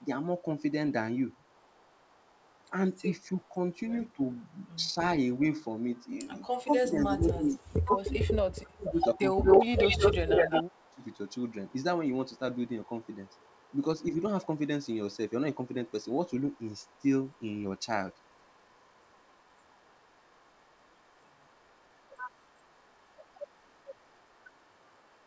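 Throughout the whole clip, a faint delayed copy of the speech trails the original by about 192 ms, sitting roughly 35 dB below it. This is an echo leak, most likely from a far-end loudspeaker whose echo canceller let part of the pickup return. Unlike room reverberation, which smears into a continuous tail, this is a distinct second copy at a fixed lag. Through the G.722 path, both the speech and the echo stop at 8 kHz.

From 2.7 to 4.99 s the talker's level dips in short pieces, totalling a few hundred milliseconds and falling by around 10 dB at most. From 6.64 to 11.04 s it drops much harder, by around 25 dB over roughly 3 s in total. A brief 5 dB-scale dip follows at 14.11 to 14.21 s. This is speech suppressed in double talk, likely an echo canceller turning down the near talker while the other side speaks. Packet-loss dropouts are abrupt gaps with glitches. These are instead gain dips that track the overlapping talk.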